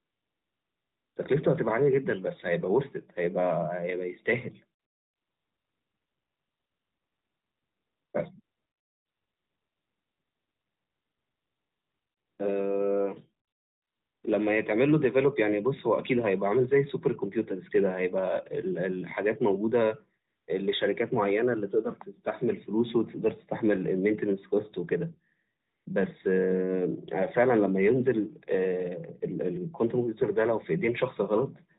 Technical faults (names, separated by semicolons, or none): AMR comfort noise